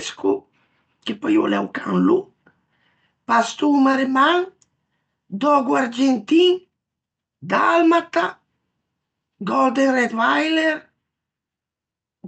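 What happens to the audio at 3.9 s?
A brief smear or wobble at 3.91–3.95 s: short concealed packet loss, where about 20 ms of the call arrived too late and the receiver extended the preceding sound to cover the gap.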